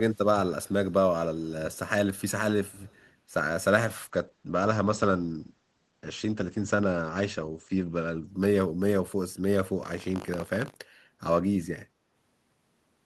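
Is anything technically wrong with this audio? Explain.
Yes, three kinds of fault can be heard.

Echo leak: at 0.1 to 0.27 s, 0.62 to 0.93 s and 2.65 to 3.12 s, a faint copy of the speech trails it by 182 ms, about 35 dB down. The likely cause is a far-end echo canceller letting loudspeaker pickup return. A spectrogram shows weak ghost harmonics shifted 182 ms later.

Call bitrate drop: from 3.88 to 9.69 s the sound turns watery and muffled. The encoder was starved of bits, and the coding points to a fall from roughly 32 to 12 kbps. Bandwidth shrinks from 20 kHz to 8 kHz, bottoming out for 3.74 s. The spectrogram shows a hard ceiling at 8 kHz.

Buffer tearing: from 9.82 to 10.77 s a robotic 50 Hz rattle rides on the speech. This fits a 20 ms buffer period whose writer and reader have slipped. A small slice of each period, a few percent, repeats audio about 70 ms old. The waveform shows regular hard splices every 20 ms.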